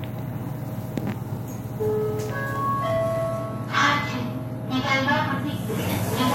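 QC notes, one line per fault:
2.74–6.35 s, adaptive stream at a lower bitrate: at 2.74 s the sound switches abruptly, with no gap, to a thinner, swishier version that runs to the end. The treble turns synthetic and smeared, which points to a drop from a stream near 96 kbit/s to a parametric low-rate one near 24 kbit/s. A spectrogram shows a hard ceiling at 14.9 kHz and smeared upper bands from that instant, while the waveform stays continuous.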